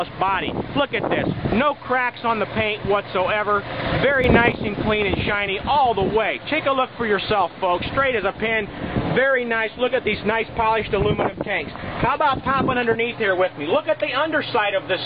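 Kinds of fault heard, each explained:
Sudden gain jump: At 4.24 s the level steps up by about 6 dB in a single instant, with no ramp, and stays raised until it drops back at 4.52 s. The background noise rises and falls exactly with the wanted sound, which rules out a louder source or a compressor reacting. The hard, unsmoothed edges point to a gain setting or bit shift that was likely applied directly to the samples.
Adaptive stream at a lower bitrate: From 5.21 s to the end of the clip, coding artefacts grow more obvious, as when a stream falls back to a cheaper version on a slow connection. The change fits a move from roughly 96 kbit/s to roughly 24 kbit/s AAC. Unlike a dropout, there is no gap or silence, only an abrupt loss of quality that does not recover.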